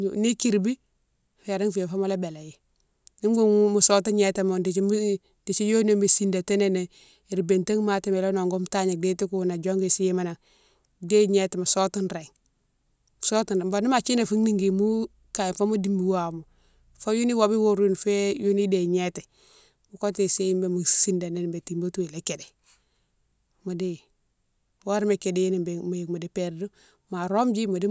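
A careful listen to this speech recording turned up nothing that stood out as a technical problem.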